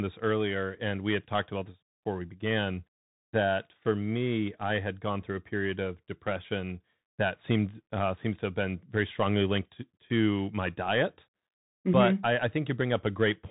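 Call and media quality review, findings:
Bluetooth CVSD headset codec, throughout. Link on the narrowband headset profile, one-bit delta coding, which fits a 64 kbps stream. Nothing above 3.9 kHz. Adaptive step lags loud high-frequency peaks. Plainly audible: muffled, band-limited speech, scratchy s sounds, slope-overload distortion on loud high content, granular hiss under the speech.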